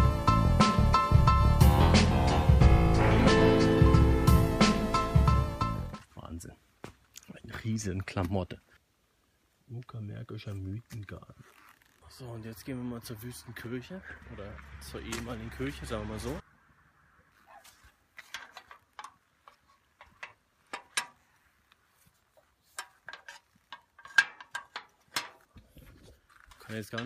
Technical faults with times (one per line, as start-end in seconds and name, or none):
none